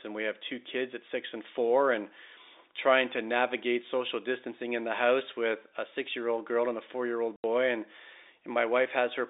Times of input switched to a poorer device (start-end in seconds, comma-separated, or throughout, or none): none